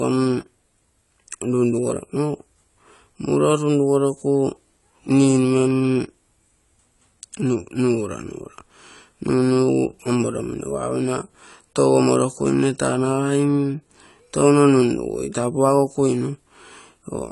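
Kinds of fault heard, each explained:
AAC compression: likely a low-bitrate AAC-LC encode, around 32 kbps. The speech sounds dull and smeared, nothing above 11.5 kHz, with warbly, fizzy sibilants throughout.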